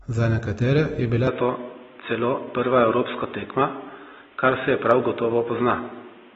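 From the start, the speech carries plainly audible damage of the kind AAC compression leaves, likely from a low-rate AAC-LC encode; the texture fits a bitrate of around 27 kbps. The band still reaches about 21.1 kHz, so there's no lowered cut-off. The trouble sits inside the band: coarsely quantised frequency lines smear the sound and give it a warbling, fizzy edge. Because it's present evenly through the whole clip, it's a coding fault, not a change of hardware.

At 1.27 s the sound changes character abruptly and stays that way to the end, which points to the input having switched to a poorer device, likely a headset call profile or a lesser microphone. Nothing above 3.8 kHz survives, so the speech turns narrow and boxy. A new background noise appears, roughly 30 dB below the speech. There's no gap at the switch and the loudness barely moves. The one-moment, lasting step in bandwidth and noise floor is what separates this from codec damage, which never moves.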